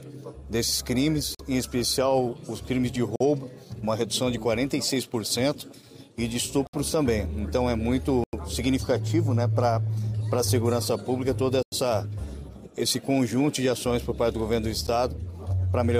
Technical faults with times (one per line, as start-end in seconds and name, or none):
1.35-1.39 block of digital silence
3.16-3.20 block of digital silence
6.67-6.73 block of digital silence
8.24-8.33 block of digital silence
11.63-11.72 block of digital silence
14.87 block of digital silence